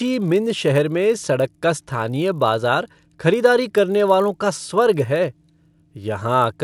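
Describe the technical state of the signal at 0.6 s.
At 0.6 s the speech carries the resampler restarted on every block fault, present throughout. Each 20 ms block was converted separately, fitting 24 kHz to 48 kHz, with edge errors producing a 50 Hz buzz. Unlike mains hum, it vanishes whenever the speech stops.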